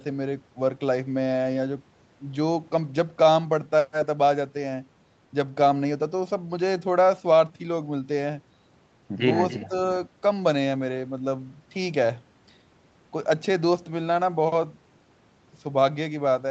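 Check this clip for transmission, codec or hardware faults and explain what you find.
Two short faults sit together just after 9.5 s, both from the far end's acoustic echo control rather than the codec or hardware.

Echo leak, 9.49 to 9.68 s: a faint delayed copy of the speech, about 15 dB below the talker, trails the original by 286 ms. The likely cause is a far-end loudspeaker feeding its microphone while the echo canceller fails to subtract all of that pickup, so the residue travels back down the call. It sounds like a delayed echo of what was just said.

Speech suppressed in double talk, 9.68 to 9.73 s: right after the echo, the talker's level dips by as much as roughly 10 dB for about 50 ms. This likely happened because the canceller saw echo and local speech overlapping, could not tell them apart, and pulled down the gain on both. The result is a brief dip in the speech, heard over the Opus call audio, which stops at 8 kHz.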